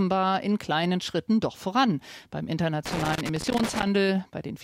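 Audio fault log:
2.86–3.87 s, loose connector crackle: a worn contact making and breaking chops the speech into an irregular burst of crackle and scratching.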